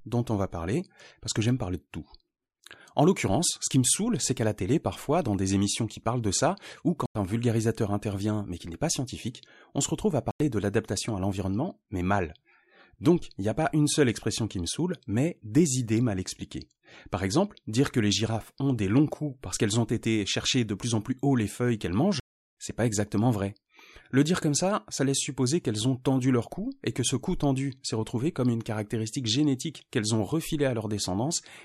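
At 7.06 s, just after "parlent de ça ou", the speech snaps off for about 93 ms and returns before "un vulgarisateur intervient mais". The same happens at 10.31 s, between "on se retrouve à" and "de l'adaptation à l'environnement". At 22.20 s a longer 0.37 s hole opens after "haut les feuilles qu'elles", ending before "c'est pas exactement vrai". These are blocks of digital silence. The short gaps fit a 4096-sample buffer and the long one a 16384-sample buffer, left as zeros when output wasn't filled in time.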